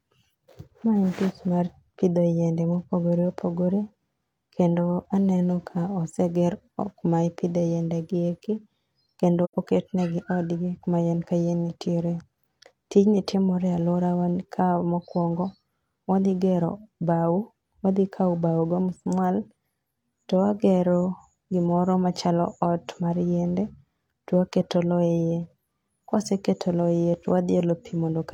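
At 9.44 s the speech drops into a short, soft-edged gap lasting until about 9.54 s. This is AAC frame loss with muting: roughly 85 ms of coded audio, consistent with two lost frames, never reached the decoder, which filled the missing spectrum with silence. Overlapping transform windows taper the sound down and back up. On a spectrogram this shows as a clean vertical blank band across all frequencies. The waveform shows a smooth fade to near silence and back.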